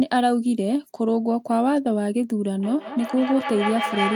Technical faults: feedback echo between two devices

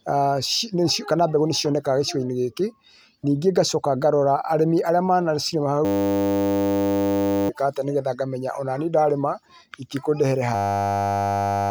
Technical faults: system hang loop

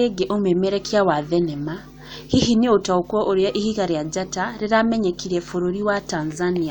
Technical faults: none

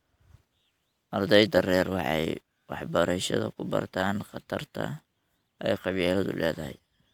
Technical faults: none

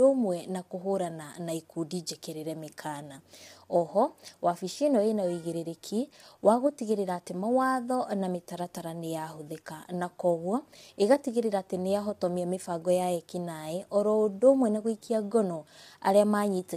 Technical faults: low-delay AAC compression

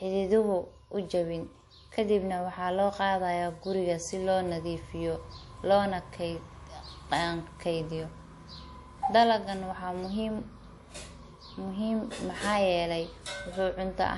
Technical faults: transcoding between lossy codecs

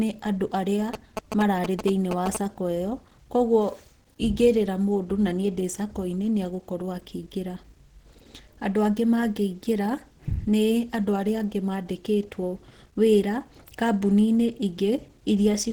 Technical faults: Opus compression; GSM signalling bursts

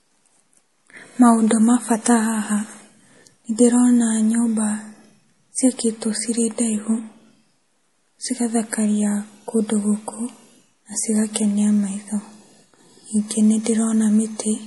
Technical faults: MP3 compression

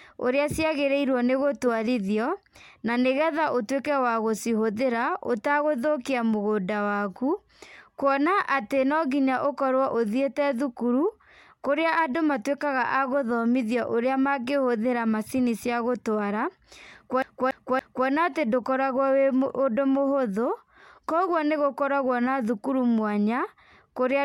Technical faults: CD stuck on one turn

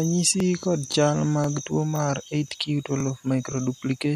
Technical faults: low bit depth without dither; overlapping chunks

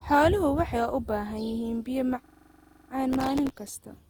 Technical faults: generation loss; system hang loop; processor overload crackle

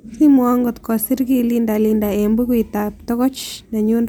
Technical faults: none

